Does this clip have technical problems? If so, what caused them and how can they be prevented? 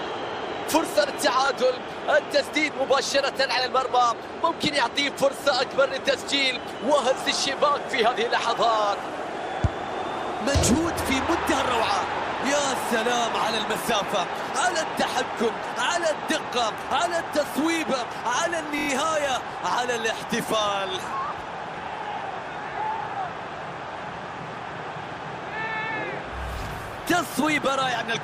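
Yes. A repeated buffer occurs at 1.46 s and again at 18.79 to 18.88 s: fresh audio failed to reach the output in time, so the device replayed its last block of roughly 23 ms, which fits a 1024-sample buffer. The first time it plays once extra, a brief stutter; the second time it repeats four extra times, a longer stammer with a hard join at each repeat, and no audio seems to be skipped. Larger buffers or lower system load prevent this.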